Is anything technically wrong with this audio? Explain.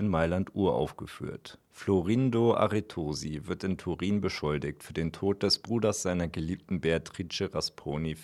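No, nothing technically wrong can be heard in this audio. No working path is listed to comment on, so there is nothing further to single out.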